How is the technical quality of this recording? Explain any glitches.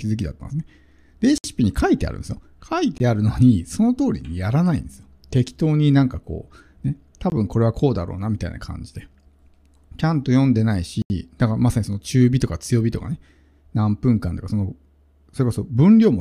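The recording has four blocks of digital silence, at 1.38–1.44 s (60 ms), 2.98–3.00 s (20 ms), 7.30–7.32 s (20 ms) and 11.02–11.10 s (80 ms). Zeros were played in place of audio, likely because output buffers were not filled in time, so the sound cuts abruptly to nothing and back: short holes for the shorter gaps, audible holes for the longer ones.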